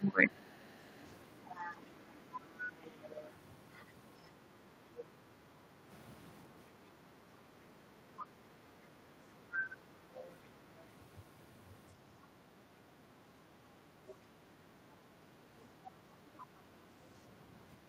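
Speech opens with speech suppressed in double talk from 0.0 to 0.39 s: the voice sinks by roughly 25 dB, likely because the echo canceller turned down the near talker along with the loudspeaker echo while both sides spoke. The other side's voice leaks through from 1.45 to 5.04 s, 8.19 to 10.32 s and 14.08 to 16.44 s, a second voice roughly 25 to 30 dB under the talker, likely loudspeaker echo the canceller left uncancelled. Because it is a separate, fainter voice, it differs from room reverb, which trails the talker's own sound. The background is gated by the echo canceller between 5.66 and 8.95 s, dipping about 6 dB for about 300 ms in total, and from 13.71 to 14.01 s, dipping about 8 dB, as the canceller clamped the microphone during loudspeaker playback.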